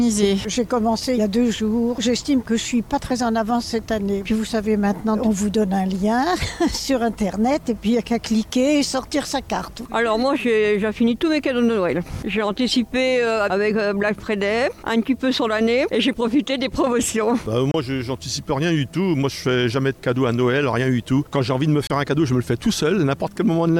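At 17.71 s and again at 21.87 s the sound cuts out for about 27 ms. This is likely a Bluetooth dropout, consistent with two lost packets. Unlike a stall, playback resumes further on, skipping the missing audio.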